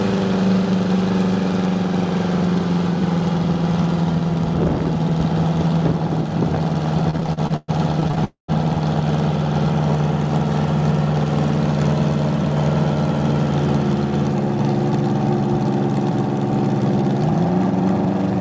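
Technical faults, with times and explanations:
7.02–8.19 s, repeated stalls (stutter): audio data kept arriving later than it was played, so the jitter buffer emptied 15 times. Each gap, the longest 119 ms, was bridged by extending the last sound, adding about 326 ms overall. Nothing is lost, but the passage drags and stutters.
8.25–8.50 s, call audio freeze: a hold-up in delivery likely drained the jitter buffer again. The receiver stretched the final sound for 238 ms, fading to silence for the last 120 ms before resuming where it stopped, inserting a pause rather than dropping audio.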